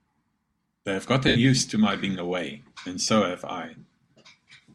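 At 1.28 s the speech breaks into a brief noisy smear lasting about 75 ms, and at 3.03 to 3.08 s a shorter one of about 37.5 ms follows. Both are lost LE Audio frames. The LC3 decoder filled each gap by repeating the last good spectrum with randomised signs and fading it, which fits runs of 7.5 ms frames. Tonal detail washes into hiss before the signal resumes, with light codec damage underneath.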